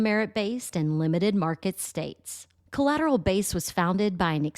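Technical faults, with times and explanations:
0.69–0.72 s, compressed frames skipped: about five frames, roughly 50 ms of speech, never play, so the audio jumps ahead by that length.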